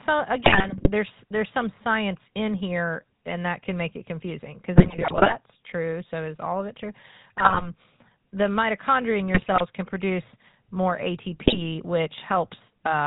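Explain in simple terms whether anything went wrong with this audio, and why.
Things did go wrong. The whole clip passed through the GSM full-rate codec, an old mobile phone coder. It removes everything above 4 kHz, so voices sound buzzy and rough. There are also GSM bit errors. Corrupted data reached the decoder, and the speech breaks into squawks and gargling at 0.44–0.91 s, 4.76–5.35 s, 7.38–7.67 s, 9.34–9.62 s and 11.45–11.62 s.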